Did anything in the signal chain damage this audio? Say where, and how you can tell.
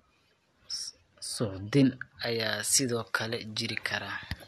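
Yes. Pre-emphasis left on from 2.23 s to the end. The speech turns thin and sibilant, with treble about 11 dB high at 10 kHz, so transmission de-emphasis was skipped.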